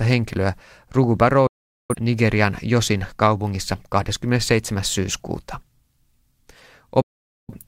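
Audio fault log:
1.47 to 1.95 s and 7.02 to 7.54 s, digital broadcast dropout: the receiver muted on lost frames, with a fade of about 3 ms, leaving a flat silent gap in the waveform and a blank full-band stripe on the spectrogram.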